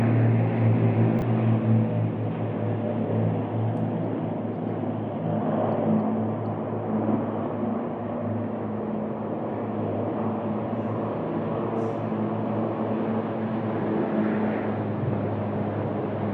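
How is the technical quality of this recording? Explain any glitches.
One brief glitch stands out, a chunks-out-of-order fault between 1.19 and 1.22 s. It is heard as a tiny jumbled stutter, a momentary scramble in the sound lasting about 30 ms. The cause is that a 10 ms slice of audio was delivered or written two chunks late, so it plays after the two slices that should follow it. Nothing is missing, but reordering the material creates three hard joins where the waveform jumps abruptly.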